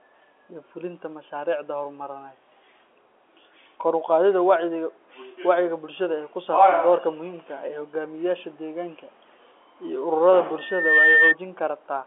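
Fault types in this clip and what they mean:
Loudspeaker feedback squeal: the mic catches its own speaker and a 1.8 kHz tone runs away, swelling over roughly 0.4 s into a squeal a little louder than the speech.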